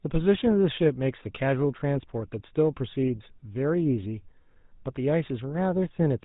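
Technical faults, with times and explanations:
Throughout, GSM full-rate codec. The speech has a plainly audible buzzy, gravelly roughness. The codec models the vocal tract and excites it with sparse, regularly spaced pulses. This fits a 13 kbps phone link. Nothing above 4 kHz survives, so the sound is dull and narrow.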